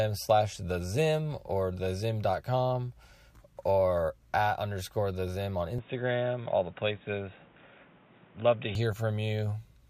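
At 5.79 s the speech abruptly turns dull and boxy, with no gap at the changeover and no noticeable jump in level, and it stays that way until 8.75 s, when the fuller sound returns. This is most likely an input switched to a poorer device: nothing above 3.8 kHz gets through, and a new background noise sits roughly 30 dB below the speech. A spectrogram would show the upper band cut off sharply across that stretch, while the waveform envelope barely changes.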